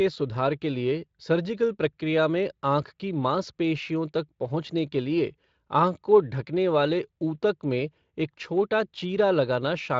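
No faults to report: the speech carries only light coding texture and has nothing above about 7.6 kHz, as expected from a wideband voice codec at a moderate rate.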